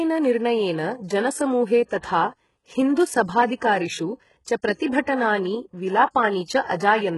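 A speech clip carrying heavy damage consistent with HE-AAC compression: sibilants turn gritty and metallic, and the sound stops dead at 11.5 kHz, a combination that points to a very low bitrate around 12 kbps. This is likely spectral band replication synthesising treble rather than simple low-pass filtering, which would leave the highs missing instead of misaligned. From 6.45 to 6.48 s a 36 ms wash of hiss precedes an attack, a pre-echo where block-spread quantisation noise leaks ahead of the transient, unlike reverb, which trails after.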